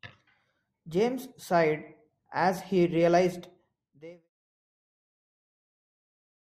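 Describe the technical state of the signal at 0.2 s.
At 0.2 s the speech signal is intact, with no audible fault at that moment.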